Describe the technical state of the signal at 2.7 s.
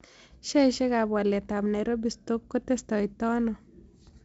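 At 2.7 s the speech signal is intact, with no fault present, just the steady G.722 wideband telephone coding at 56 kbit/s, which leaves nothing above roughly 7.7 kHz and adds only a light codec hiss.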